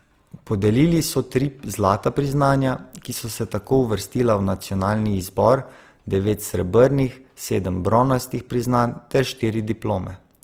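Throughout, the speech has a grainy, rough texture, likely Opus compression in music mode, noise-filling starved bands at what sounds like about 24 kbps.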